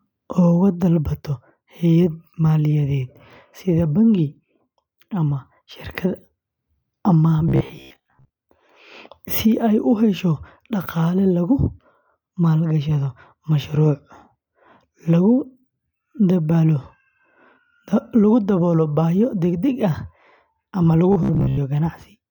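From 7.49 to 8.36 s, and from 21.13 to 21.57 s after "ama lagu", robotic sound from repeated short buffers gives a rigid metallic 66.7 Hz buzz. It is likely caused by about half the audio being replaced with repeated 15 ms chunks, which show as identical cycles in the waveform and even vertical stripes on a spectrogram.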